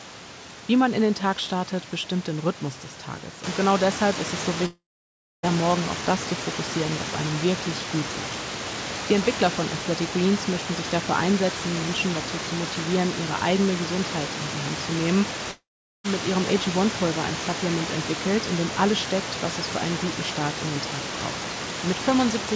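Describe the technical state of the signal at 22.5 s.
At 22.5 s the signal is intact, with the speech carried cleanly through the call path and nothing present above 8 kHz, as expected for a G.722 link.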